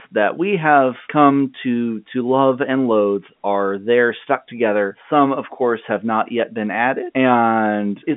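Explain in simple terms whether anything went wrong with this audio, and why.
Nothing went wrong with this audio. It's speech carried by G.711 telephone coding, the standard landline format, so it has the familiar narrow phone sound, with nothing above about 3.8 kHz getting through, as on any ordinary call.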